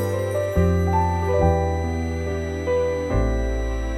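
Throughout, a switching supply whistle sits about 20 dB below the sound, wandering between 1.94 and 2.02 kHz. That drifting pitch, unlike fixed mains hum, marks a switching power supply running in audible burst mode or beating with another one.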